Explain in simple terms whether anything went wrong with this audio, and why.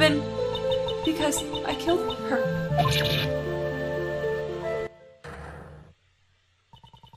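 Something in the playback or recording chain most likely switched its volume setting instantly instead of easing it down, a fault called a sudden gain jump. At 4.87 s the audio drops abruptly to a much quieter level and stays there until the end of the clip. Because the level change happens in a single step, the sound and its background hiss fall away together, all at once, rather than fading gradually.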